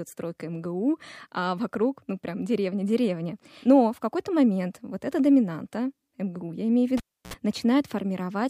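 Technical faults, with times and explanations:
6.97–7.34 s, cable pulled and plugged in: just after "я имею в", a pop marks a live cable being yanked out, and the speech drops to near silence for about 0.31 s. A 65 ms burst of 60 Hz mains buzz follows, heard while only the plug tip makes contact and picks up hum through the ungrounded connection. A second pop lands as the connector seats fully and the speech returns.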